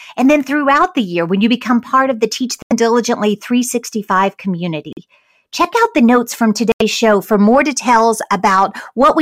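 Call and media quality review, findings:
Abrupt silent holes in speech at 2.62–2.73 s, 4.92–4.99 s and 6.72–6.82 s, timing intact. Decoder: corrupt frame muted, damaged compressed frames rejected and replaced with silence.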